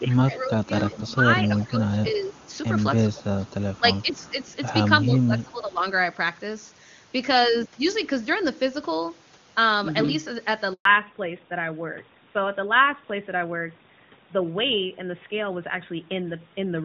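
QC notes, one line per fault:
0.04–2.41, 3.04–3.25, 3.79–4.47 and 5.03–5.84 s, speech suppressed in double talk: the near voice sinks by up to about 15 dB (about 10 dB in the third run), for roughly 1.5 s in the first run and shorter spans later. This is likely an echo canceller that cannot tell the local talker from loudspeaker echo while both ends are active, so it attenuates everything.
0.94–1.04, 1.60–1.64, 2.24–2.58 and 3.45–4.52 s, echo leak: a faint delayed copy of the speech trails the original by about 345 ms. It is about 15 dB down at first, then about 25, 35 and 30 dB below the speech in the later runs. It is longest in the last run. Likely cause: a loudspeaker end whose canceller let residual pickup through and sent it back. The steady 345 ms lag separates it from room reverberation, which would smear continuously instead of repeating at a fixed delay.
10.73–10.85 s, handover gap: the speech fades within a few tens of milliseconds and leaves a 120 ms hole of silence while the call moves to another network and no speech frames arrive. 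Whatever was said in that window is simply gone. It is not a codec glitch, because nothing is concealed or repeated. It is not double-talk suppression either, because nothing is heard at all, and the sound that follows has a different bandwidth.
10.85 s to the end, fallback to narrowband: right after the gap, all content above 4 kHz disappears. The voice turns duller and rougher, with sibilants losing their edge. This fits a switch from AMR-WB at 23.85 kbit/s, which was clean before this point, to AMR-NB at 12.2 kbit/s. Here the cut is a sudden, permanent loss of the upper band tied to the handover moment.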